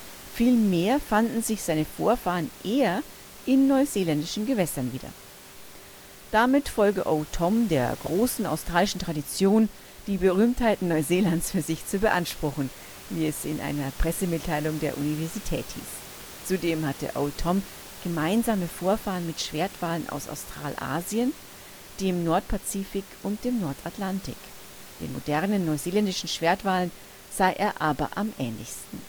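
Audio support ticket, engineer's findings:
No system faults found in this speech recording; the room's own background noise sits about 19 dB below the speech, as expected from the recording space.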